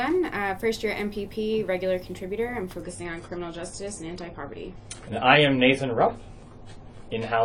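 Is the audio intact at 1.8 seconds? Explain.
Yes, at 1.8 seconds the audio plays through cleanly, with no dropout, click, distortion or other fault at that point.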